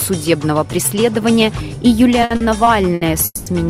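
Between 2.21 and 3.03 s the audio stutters: five short stalls totalling about 200 ms, the longest 70 ms, stretch the passage with repeated sound. These are repeated stalls (stutter), packets reaching the jitter buffer late so it repeatedly emptied and the receiver extended the last sound, with nothing lost. From 3.25 to 3.54 s the sound hangs as a continued, fading buzz or hiss for about 210 ms, ending in roughly 30 ms of silence before resuming where it stopped. This is a call audio freeze, likely from packets delayed in transit and an empty jitter buffer.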